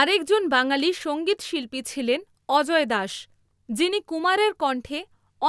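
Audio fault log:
No faults heard in this recording.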